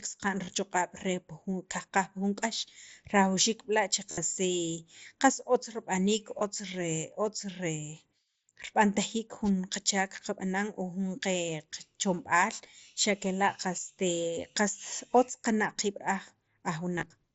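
At 0.45 s there is a brief concealed Bluetooth headset packet loss. About 22 ms of audio went missing, and the receiver patched it with copies of the waveform just before.

At 4.10 s a longer gap follows, lasting until 4.18 s. It includes a 60 ms run. There the repeated fragment turns into a held, buzzy tone, with a slight warble as real sound resumes.

At 6.39 s a 15 ms loss follows.

At 9.44 s a wireless microphone noise hit occurs. The radio link faded briefly, and receiver noise rose into a short burst of static lasting until 9.50 s.

From 16.96 s to 17.03 s scattered losses total 45 ms. Each run is short. The mSBC headset link, at about 61 kbps, adds only light graininess.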